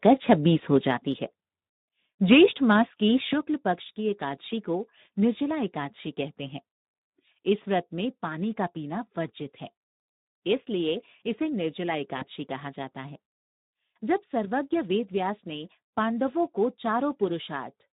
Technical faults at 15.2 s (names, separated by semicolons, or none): Speex codec